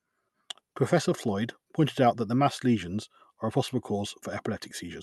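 The speech carries no technical faults, and its passage through a call codec and jitter buffer leaves only the ordinary coding texture of such a link, with the top end rolled off at around 12 kHz.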